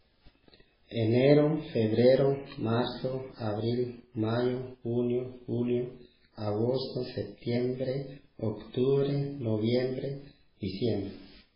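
Throughout the recording, the speech has likely been through heavy MP3 compression, with the encoder so short of bits that it fits a bitrate of around 16 kbps. To save data it has removed everything above 5.2 kHz and discarded weak frequency lines, which flicker on and off from frame to frame. The speech sounds dull and band-limited, with a watery, swirling texture, metallic chirps on s sounds and smeared attacks.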